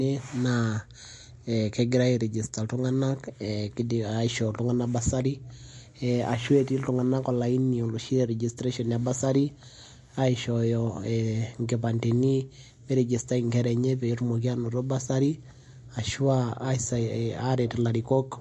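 From start to finish the speech has a watery, swirling quality. S sounds carry a metallic chirp, consonant attacks are smeared, and nothing is audible above 11.3 kHz, so the top end stops abruptly. This is MP3 compression, likely at a low bitrate, which fits a figure near 48 kbps. Short of bits, the encoder cut the treble at that fixed point and kept dropping weak frequency lines in and out between frames, producing the swirl.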